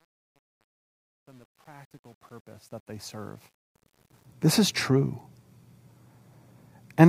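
Truncation distortion on a fade runs from 0.00 s to 4.25 s, across the fade-in that reaches full level at 4.25 s. The gain stage drops the low bits without dither, and the coarseness fits roughly 10-bit resolution. While the speech is still faint, its waveform collapses into a few square steps. The roughest stretch, from 0.00 s to 3.24 s, sounds gritty before the level rises clear.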